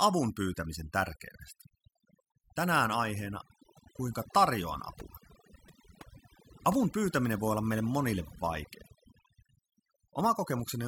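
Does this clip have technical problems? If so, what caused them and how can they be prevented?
Yes, overdone noise removal runs throughout. An aggressive denoiser mutes bands near its noise estimate, leaving speech over twinkly near-silence. Go gentler on the reduction, or record somewhere quieter.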